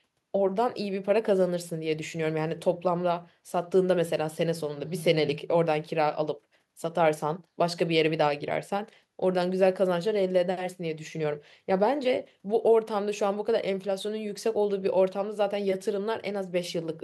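No technical faults are audible anywhere in the recording.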